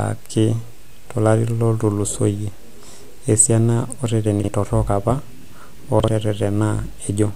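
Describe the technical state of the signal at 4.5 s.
Just before "torok apa", from 4.40 to 4.48 s, the speech has chunks out of order. One 40 ms chunk arrived a chunk late and plays after its successor, so the sound jumbles briefly. On a waveform, three abrupt discontinuities appear, and a spectrogram shows matching vertical broadband lines.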